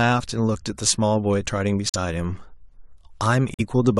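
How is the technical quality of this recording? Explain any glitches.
The recording has two abrupt dropouts. From 1.88 to 1.96 s the speech cuts to dead silence, and again from 3.54 to 3.61 s, each hole opening sharply rather than fading, with timing intact afterward. These are corrupt frames muted: damaged compressed frames were rejected by the decoder and replaced with silence. The lengths, about 80 ms and 60 ms, fit roughly three and two codec frames lost.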